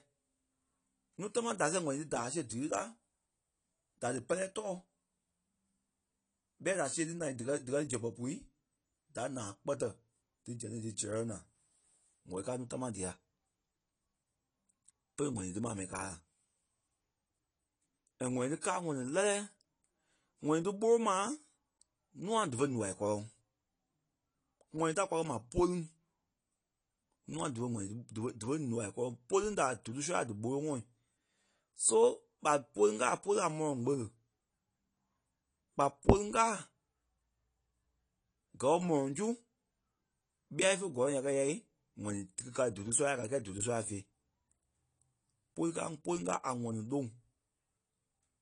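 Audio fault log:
Throughout, AAC compression: The speech is plainly dulled, with a smeared, warbling texture on sibilants and sustained sounds. Nothing reaches above 10.2 kHz. The likely cause is AAC-LC coding at a low bitrate, something near 32 kbps, where the encoder drops the top band and quantises the rest coarsely to save bits. A spectrogram shows a hard, flat ceiling at 10.2 kHz, with patchy gaps and speckle in the upper bands below it.
18.61 s, pre-echo: A short hiss arrives just ahead of a sharp onset and spreads about 16 ms before it, so the attack sounds softened rather than crisp. The codec spreads the coding noise for the loud attack across its whole transform block, including the quiet moment before the attack begins. On the waveform, low-level fuzz rises before the transient's edge. A spectrogram shows a thin, broadband smear leading into the onset.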